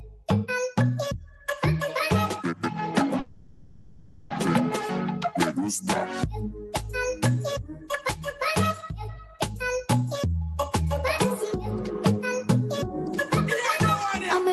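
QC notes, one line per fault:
3.19–4.32 s, call audio freeze: the sound stalls and the last instant is stretched into a fading buzz for about 1.1 s, then resumes exactly where it stopped, nothing lost, likely from packets held up in transit draining the jitter buffer. Spectrogram shows smeared, repeating frames; waveform a decaying plateau.
7.73–7.89 s, sound cut by the noise suppressor: for roughly 150 ms the suppressor mistook the sound for noise and pulled it down, at most about 6 dB. The waveform envelope dips briefly and the spectrogram's steady components thin out, while any sharp onsets survive.
12.12–12.61 s, jitter buffer speed-up: to shed built-up delay the receiver cut short pitch-period slices, around 50 ms in total, so this half-second plays at 107% speed with pitch unchanged and sounds slightly rushed. Waveform periods keep their length; spectrogram harmonics stay level but events compress in time.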